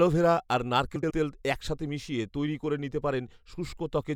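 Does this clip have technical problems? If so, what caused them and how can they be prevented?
Yes: frames out of order from 0.96 to 1.11 s, where two 72 ms blocks of speech swap places, giving a garbled flutter, not a dropout, since no time is lost. Proper sequence-number reordering in the jitter buffer prevents it.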